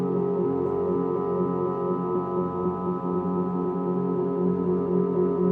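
No technical faults can be heard anywhere in the recording.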